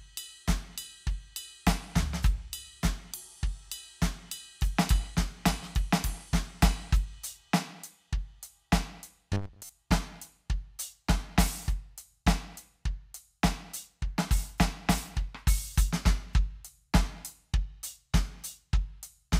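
At 9.33 s the music turns into robotic sound from repeated short buffers, lasting until 9.69 s. New audio was likely arriving too slowly, so playback kept looping a roughly 10 ms slice instead, with about half the material replaced by these repeats. The loop imposes a rigid 100 Hz buzz, metallic and mechanical, that only loosely tracks the music. A spectrogram shows evenly spaced harmonics at 100 Hz intervals; the waveform shows identical 10 ms cycles.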